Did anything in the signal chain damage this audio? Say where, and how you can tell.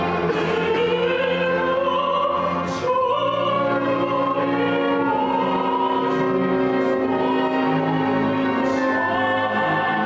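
No, nothing in the signal chain damaged this audio.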